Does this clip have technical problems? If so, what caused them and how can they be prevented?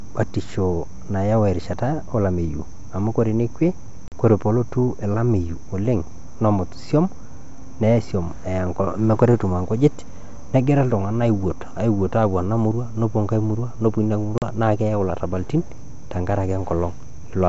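Yes. Packet loss on an ADPCM call cuts the speech twice, at 4.08 to 4.13 s and at 14.38 to 14.43 s. Each time about 40 ms of audio is replaced by silence, which fits a couple of lost 20 ms packets. The hole makes the receiver's adaptive predictor and step size drift from the sender's, so the speech comes back with brief, slight distortion, then recovers within some tens of milliseconds. On a waveform each loss is a flat, abruptly edged gap followed by a short irregular burst; on a spectrogram it is a blank vertical stripe across the 7 kHz band the 64 kbit/s G.722 coding carries. Packet loss concealment that also resets or resynchronises the ADPCM decoder state, together with forward error correction or redundant packets on lossy links, would prevent it.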